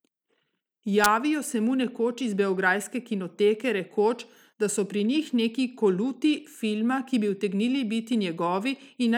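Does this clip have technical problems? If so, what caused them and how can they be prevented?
No, this clip has no technical problems, so there is nothing to trace a cause for or prevent.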